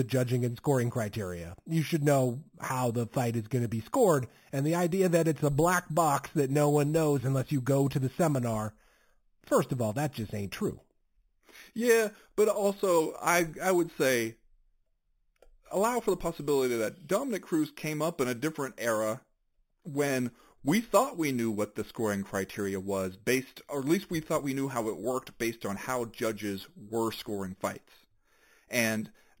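From start to end the speech carries imaging from sample-and-hold upsampling: each sample was simply repeated to raise the rate, which fits 8 kHz material brought up to 44.1 kHz, with no smoothing filter. A mirrored copy of the voice fills 4 to 8 kHz at about 17 dB below it, heard as metallic fizz. Unlike steady hiss, the fizz rises and falls with the speech and vanishes in pauses, and its pitch moves against the voice's.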